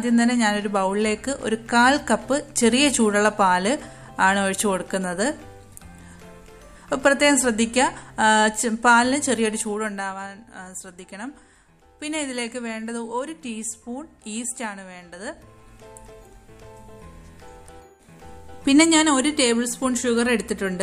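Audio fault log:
9.54–10.29 s and 15.12–15.70 s, zipper noise: A brisk ticking rides on the sound as the level drops by roughly 10 dB and later rises by roughly 10 dB. Each change moves in raw 2 dB steps, several times per second, with no smoothing, so every jump clicks.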